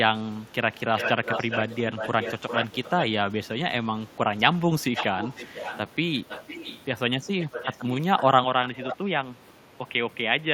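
Echo leak is heard at 0.96–1.79 s, 1.97–3.05 s, 4.07–4.12 s, 4.94–5.79 s, 6.29–6.85 s, 7.4–7.95 s, 8.18–8.22 s and 8.68–8.97 s. A delayed copy of the speech trails the original, about 0.4 s late in the first three stretches and about 0.5 s late from 4.94 s on. It is nearly as loud as the speech early on, faint around 4.1 s, and moderately strong later. The likely cause is a far end on a loudspeaker whose echo canceller let its microphone's pickup return.

Input switched to a poorer device at 8.44 s and lasts to the end, with no gap at the change. The likely cause is the system moving to a lower-grade microphone or a headset call profile. The band narrows afterward, so the speech turns dull and boxy. The level also drops by roughly 5 dB, and a faint new background noise sits far below the speech.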